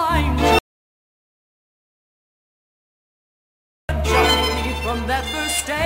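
At 0.59 s the sound cuts off abruptly and stays gone until 3.89 s, an audio dropout to silence lasting about 3.3 s. The gap is silent with no room tone, so whatever happened there is lost. The likely cause is a lost input, such as a disconnected device, failed link or accidental mute, while recording continued. On a waveform it shows as a dead-flat line. On a spectrogram it is a blank black band with hard vertical edges at both ends.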